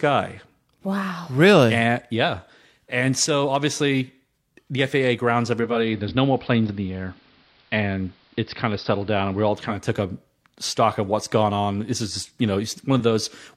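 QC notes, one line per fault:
5.51–9.88 s, digital radio blending to analogue: the receiver lost the digital stream and cross-faded over about 0.47 s to the station's AM broadcast, then faded back. While on AM a hiss floor sits roughly 35 dB under the signal, and level shifts by about 1 dB. Unlike a plain low-pass filter or a codec bandwidth drop, the dull, hissy stretch arrives and leaves as a smooth fade.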